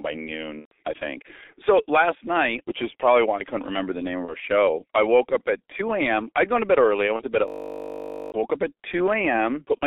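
A speech clip heard through a narrow, muffled line: everything sits between about 300 Hz and 3.6 kHz, the voice is hoarse and consonants smear together, which fits the G.723.1 codec at around 6 kbit/s with its 30 ms frames and slow-moving voice model. Three times the voice briefly turns into a stretched, fading smear: from 0.59 to 0.72 s just before "I think", from 4.25 to 4.35 s, and from 7.16 to 7.24 s between "to bed early I" and "to bed at". This is VoIP packet loss concealed by the speech codec. The decoder bridged the missing stretches by extending its last pitch and filter at falling gain, so the sound stays weak for a moment afterwards. From 7.48 to 8.32 s, between "to bed at" and "woke up", a steady 50 Hz buzz replaces the voice. This is a system hang loop, with one 20 ms slice of audio repeating 42 times while the system stalled, and about a second of speech is lost.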